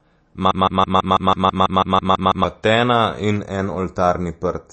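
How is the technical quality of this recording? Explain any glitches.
The recording has three audible faults: heavy compression throughout, a stuck loop early on, and a hollow, phasey coloration at the end.

MP3 compression runs through the whole speech clip. Nothing is present above 8.3 kHz, and the damage is plainly audible, which points to a low bitrate of around 32 kbps. Starved of bits, the encoder discards the treble above a fixed cutoff and drops weaker frequency components, which flicker in and out from frame to frame. The result is a dull, watery, swirling texture, with smeared consonant attacks and metallic chirps on s sounds.

A broken-record loop occupies 0.51 s to 2.44 s. A 164 ms fragment repeats exactly, back to back, twelve times, giving a stuttering, machine-gun effect. The likely cause is a stall in the player, encoder or stream, which kept resending the last chunk it held. 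The audio that should have filled those two seconds is gone.

Channel delay with comb filtering runs from 3.36 s to the end. One channel lags the other by a fraction of a millisecond. When the two are summed to mono, the shared content cancels at evenly spaced frequencies, with the first notch around 3 kHz. This carves fixed gaps into the upper midrange and leaves the sound hollow, phasey and thin.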